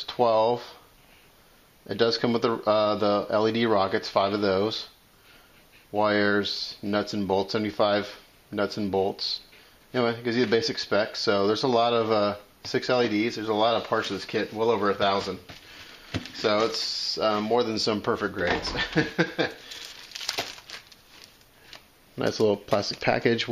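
No technical faults can be heard anywhere in this audio. Nothing in the sound points to a problem in how it was captured, processed or delivered.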